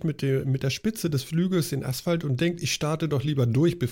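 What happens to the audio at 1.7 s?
Nothing goes wrong at 1.7 s; the speech continues intact through that moment.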